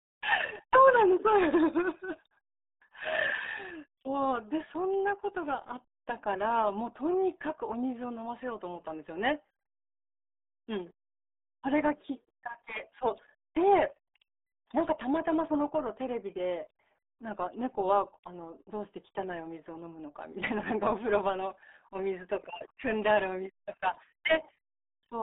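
From start to finish the speech carries heavy RealAudio 14.4 codec damage: it's squeezed into roughly 300 Hz to 3.7 kHz, with nothing above 3.8 kHz, which fits an 8 kbit/s dial-up-era stream. Everything sounds muffled and gargly.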